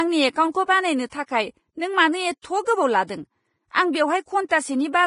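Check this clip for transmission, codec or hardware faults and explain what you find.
Two faults are present: heavy lossy-codec damage across the whole clip, and one pre-echo on an attack just after a second in.

Vorbis compression, throughout: the encoder was likely Vorbis at a starved setting, consistent with roughly 27 kbps. It removed everything above 10.5 kHz and quantised the remaining treble so coarsely that fine speech detail turns to grainy hiss, leaving sibilants rough and consonant onsets blurred.

Pre-echo, 1.10 to 1.12 s: a sharp attack landed late in a transform block, so quantisation noise sized for the loud part spread backwards through the quiet stretch before it. About 23 ms of hiss precedes the onset, which arrives softened and smeared.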